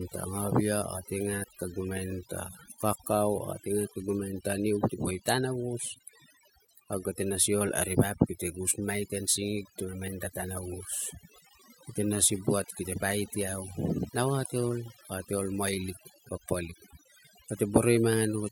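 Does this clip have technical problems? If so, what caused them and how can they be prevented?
Yes. Overdone noise removal throughout: a noise reducer set too strong cuts bands near its noise estimate, leaving twinkling near-silence and taking quiet parts of the voice with it. Prevent it by using gentler reduction settings.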